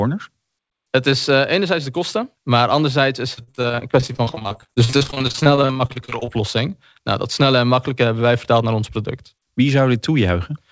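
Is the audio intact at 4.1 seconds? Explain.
No. At 4.1 s the speech sits inside a stretch of repeated packet loss (robotic sound) running from 3.34 to 6.29 s, just after "kosten maar anderzijds is". Dozens of short gaps, none longer than 45 ms, are patched by stretching the previous sound, giving choppy sound with pieces missing. On a spectrogram this shows as smeared, repeated harmonic blocks broken by brief holes, all below the 8 kHz ceiling of the call codec.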